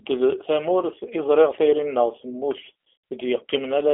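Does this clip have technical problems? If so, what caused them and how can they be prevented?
Yes. G.729 codec damage runs through the whole speech clip. The band is squeezed into a telephone line, with nothing below about 300 Hz or above 3.4 kHz, and the sound is plainly rough and synthetic. That fits an 8 kbit/s codec that models the voice with a short-term filter, a pitch predictor and a few sparse pulses per frame, so much of the natural waveform detail is discarded and rebuilt. Prevent it by carrying the call on a wideband codec such as G.722 or Opus.

VoIP packet loss concealed by the speech codec occurs from 2.95 to 3.04 s, a gap of 90 ms that fits three lost 30 ms packets. With no data arriving, the decoder keeps repeating its last pitch and filter at falling gain, so the speech smears into a buzzy tone or coloured noise that fades. Because each frame depends on the previous one, it sounds weak and distorted for a short while after real packets resume. 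Prevent it with a stable network, QoS priority for voice traffic, and forward error correction or redundancy.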